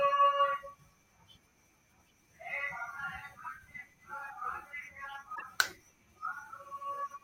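It's a speech clip with one glitch, from 5.34 to 5.43 s. The audio skips ahead and that stretch of roughly 80 ms comes out garbled. That length fits about three MP3 frames of 26.1 ms, and the likely cause is a broken MP3 bit reservoir. Some frames went missing, so the decoder pulled bytes meant for other frames into the ones that followed the gap and decoded them into junk until it got back in step.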